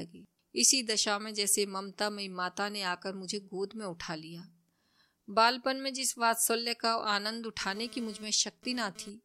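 GSM phone buzz appears from 7.61 to 9.10 s. A nearby 2G phone is transferring data, bursting about 217 times a second, and the audio circuitry rectifies those radio pulses. The result is a harsh, raspy 217 Hz buzz rich in harmonics, about 21 dB below the speech, unrelated to it.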